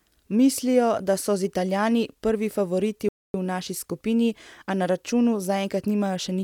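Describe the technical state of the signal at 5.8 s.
At 5.8 s the speech signal is intact, with no audible fault present at that moment.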